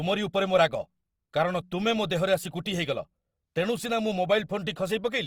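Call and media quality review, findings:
Opus compression, throughout. Speech grainy and rough, upper bands filled with noise. Band energy kept, content up to 20.2 kHz. Likely cause: music-mode encoding, starved bands noise-filled. Fits a 24 kbps stream.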